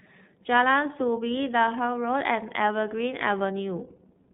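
Throughout, iLBC codec damage is plainly audible: the speech is confined to 150 Hz to 3.7 kHz, and independently coded 30 ms frames give it a rough, synthetic edge.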